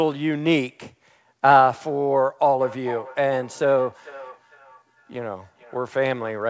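From 2.6 s to 6.41 s the speech is followed by feedback echo between two devices. A second device in the room replays the call audio, the first microphone picks it up again, and the local echo canceller cannot remove sound it never played. Each phrase returns roughly every 0.4 s, reaching about -19 dB below the speech, and grows thinner and more ringing with each pass. Those repeated, evenly spaced returns distinguish it from a single echo or from room reverberation, which decays smoothly. Over the whole clip, nothing is heard above 8 kHz, which fits a G.722 call path.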